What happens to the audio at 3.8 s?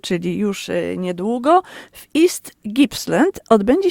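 Nothing goes wrong at 3.8 s; the audio plays through that moment intact.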